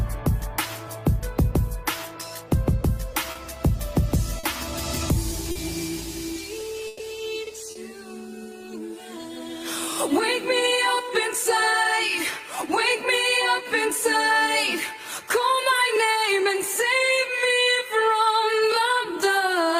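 At 3.31, 4.39 and 5.51 s there is short concealed packet loss: about 40 ms of audio never arrived, and the receiver carried the preceding sound forward before blending back. Each gap is a brief smear or wobble, too short to fade.

From 6.87 to 7.02 s a burst of packet loss drops about 120 ms. The last sound is stretched into a held buzz or hiss that dies away, then the audio resumes later. That audible decay and skip separates it from the smears.

At 7.71 s another 40 ms short loss brings back the quick smear.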